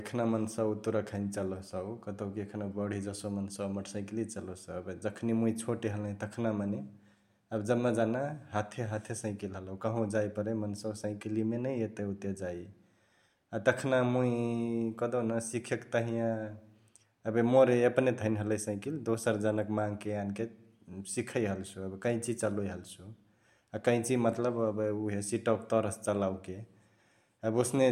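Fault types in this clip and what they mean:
No faults can be heard anywhere in this recording.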